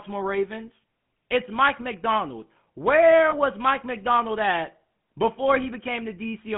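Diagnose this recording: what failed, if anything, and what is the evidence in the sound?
GSM full-rate codec, throughout the clip, at the codec stage: the speech has a plainly audible buzzy, gravelly roughness, and the band stops at about 150 Hz at the bottom and 3.4 kHz at the top. The coder keeps a vocal-tract filter and drives it with a sparse, regularly spaced pulse excitation, discarding two of every three excitation samples. The rebuilt speech therefore rasps instead of sounding breathy and smooth, which fits 13 kbit/s full-rate coding.

Lost GSM frames, at the network stage, from 3.3 to 3.33 s: the speech briefly freezes into a rough, metallic ring before normal decoding resumes. The decoder got no usable data for that stretch, so it reused the filter and excitation settings of the last good frame, holding the sound steady. The gap is short enough that it never fades to silence, and its length fits a single lost 20 ms frame.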